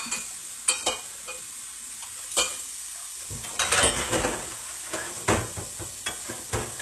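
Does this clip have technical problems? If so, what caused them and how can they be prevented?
Yes. Plainly audible HE-AAC compression runs through the whole clip. The treble sounds synthetic, with a gritty, metallic edge. Nothing is present above about 12.3 kHz. The likely cause is a low-bitrate HE-AAC encode, one that fits roughly 16 kbps. At that rate the encoder keeps only the lower spectrum. It fakes the highs by copying lower bands upward under a coarse envelope, so harmonics fail to align. Encoding at a higher bitrate, or with plain AAC, would prevent it.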